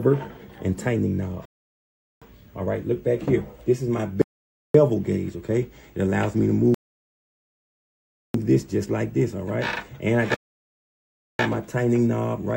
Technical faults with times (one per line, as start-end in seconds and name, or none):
0.00-12.56 video or display buzz
1.45-2.22 rebuffering stall
4.22-4.74 rebuffering stall
6.74-8.34 rebuffering stall
10.34-11.39 rebuffering stall